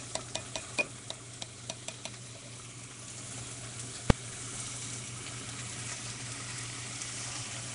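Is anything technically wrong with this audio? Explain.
Yes, two faults can be heard.

Nellymoser compression runs through the whole clip and is the likely cause of its rough, hissy halo and smeared, underwater quality. This codec, built into Flash for microphones, codes short blocks at a fixed, very low number of bits per sample. Weak frequency bands get no bits and are refilled with noise, which produces the fizz around the sound. The damage is plainly audible, and nothing is present above 10.6 kHz. The degree of damage points to a rate of around 44 kbps.

Invalid numbers at full scale occur at 4.10 s, where one sharp bang cuts through the audio. A calculation there produced infinite or undefined values, which were forced to the largest positive or negative value, far beyond the audio's peaks. The output pinned at that extreme for only 2.9 ms, which fits a 128-sample processing block. 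That block is too short to hear as separate pops at its start and end, so it comes across as a single loud crack.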